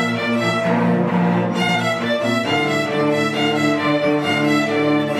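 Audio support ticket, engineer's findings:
Brief garbled flutter at 1.61 to 1.76 s. Frames out of order: two adjacent blocks of about 70 ms each decoded swapped, which fits runs of three frames. Probable component is the receive/jitter buffer. No time lost.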